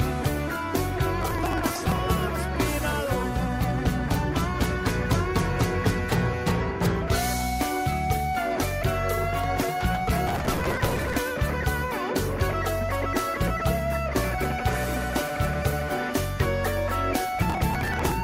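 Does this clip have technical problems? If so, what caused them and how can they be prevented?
Yes: processor overload crackle at 1.22–1.99 s, 10.27–11.16 s and 17.42–18.12 s, where many buffers of about 5 ms were skipped, leaving a gritty tear of tiny gaps rather than one clean dropout. Use larger buffers or reduce processing load.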